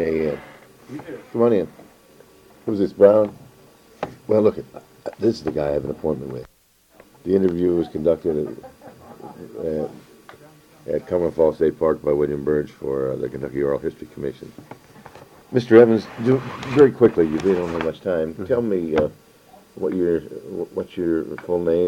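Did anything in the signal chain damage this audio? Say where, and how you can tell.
No, nothing in the signal chain has damaged this audio. No stage from capture to playback leaves a trace that can be heard.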